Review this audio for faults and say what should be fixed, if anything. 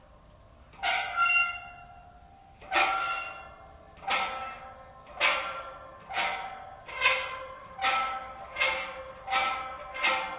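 Nothing needs fixing: the audio has passed through a call path whose narrowband coding, likely G.711 A-law, leaves no content above 4 kHz, and that band limit is simply how the path works.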